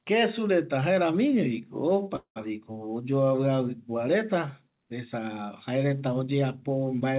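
At 2.16 s a call audio freeze begins. The sound stalls into a fading buzz, then about 90 ms of silence, before resuming at 2.38 s, likely because delayed packets emptied the jitter buffer. Unlike a dropout, nothing is lost: the speech picks up where it stopped, about 0.2 s late. Throughout, the narrowband call path carries nothing above 4 kHz.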